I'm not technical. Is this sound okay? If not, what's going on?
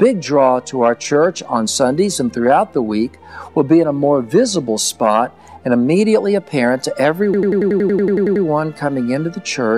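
No, there's one clear problem. From about 7.34 s to 8.45 s the sound gets stuck in a system hang loop. The computer briefly froze, and the sound hardware kept replaying the same tiny snippet, about 93 ms long, twelve times in a row. That's roughly 11 repeats a second, so it comes across as a rapid machine-gun stutter. Once it recovers, nothing seems to have gone missing.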